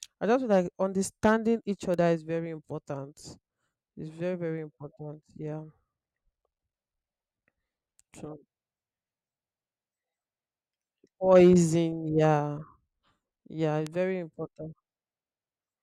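It's a speech clip with two bit error spikes: one at 1.94 s right after "feel like understanding each", another at 13.87 s just before "very important". Each is a single sharp, broadband tick peaking around -18 dBFS, where a flipped bit briefly knocked one to three samples off by a power of two.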